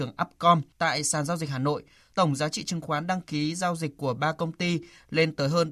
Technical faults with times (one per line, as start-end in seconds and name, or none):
none